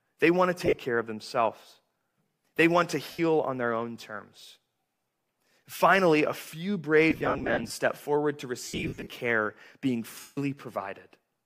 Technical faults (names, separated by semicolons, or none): lost LE Audio frames